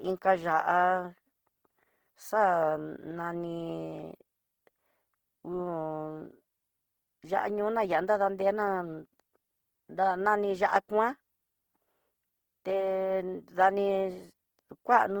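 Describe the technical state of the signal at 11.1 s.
Opus compression is present at 11.1 s, as it is across the whole recording. The speech sounds rough and grainy, with the fine detail of the voice replaced by a noisy texture. The likely cause is the codec's music (CELT) mode running short of bits, which fits a low rate of around 16 kbps. It keeps each band's energy but fills the starved bands with folded or noise content. The bandwidth stays wide, reaching about 20.1 kHz.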